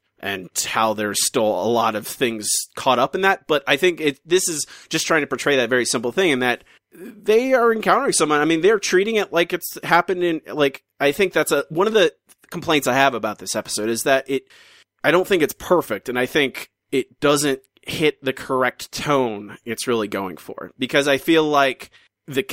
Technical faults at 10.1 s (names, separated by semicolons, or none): none